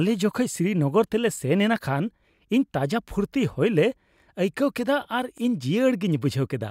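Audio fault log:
2.36–2.38 s and 5.38–5.40 s, overlapping chunks: a small stutter at each spot, the first right after "ᱛᱮᱞᱮ ᱥᱮᱱ ᱮᱱᱟ ᱠᱷᱟᱱ" and just before "ᱤᱧ ᱛᱟᱡᱟ". The speech looks like it was handled in 3.0 s blocks, with each new block starting a little before the previous one finished. So at every join about 21 ms of audio plays twice, and that tiny repeat comes through as a catch or click, right on the 3 s grid.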